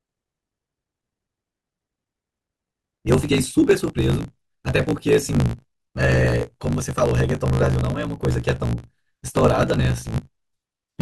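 From start to finish the speech carries a block size mismatch (truncated): each block is cut short before the next stage reads it, leaving a buzz near 54.4 Hz, which fits 1024-sample blocks. The speech runs about 1.16 times fast with its timbre intact.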